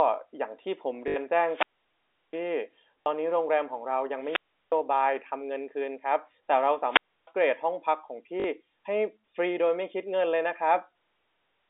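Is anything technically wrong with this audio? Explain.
Yes. The sound has two separate faults, carried on a G.711 A-law telephone line whose narrow 300 Hz to 3.6 kHz band is normal for that format.

Packet loss with last packet repeated occurs at 1.08–1.16 s (80 ms lost), 3.03–3.06 s and 8.40–8.44 s (40 ms each). The receiver lost packets and kept replaying the last one it had. The repeats buzz briefly. Losing 80 ms fits four 20 ms packets, giving a 50 Hz buzz. Unlike a dropout, the gap is filled with repeated sound, never silence.

Wireless microphone squelch dropouts occur at 1.41–2.48 s, 4.18–4.82 s and 6.85–7.31 s. In each, the analogue FM radio link faded and the receiver's squelch muted the output. The mutes last about 0.71 s, 0.36 s and 0.30 s. What separates these from the packet repeats is the sequence: hiss or static swells first, then comes a hole of near silence rather than a looped fragment, and then the sound returns. 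The holes are also far longer than the packet glitches.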